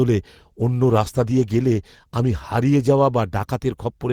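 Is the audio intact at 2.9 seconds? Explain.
No. From 0.43 s to the end, the speech sounds coarse and dulled: a call bitrate drop cut the encoder from 64 to 17 kbps.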